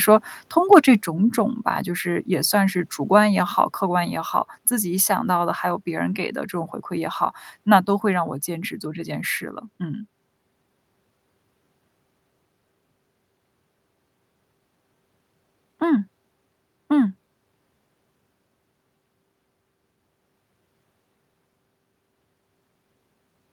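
From 0.72 to 0.79 s the speech hits microphone overload: peaks push about 2 dB past the converter's ceiling and a small share of samples are flattened, likely from input gain set too high. Unlike codec distortion, this harshness rides only on the loudest peaks as a brief crackle.

At 1.02 s the microphone volume steps down by about 5 dB, likely the call software lowering the input after that distorted peak. Voice and background fall together in a single instant and stay lower, which sets it apart from a compressor's gradual pumping or a speaker moving away.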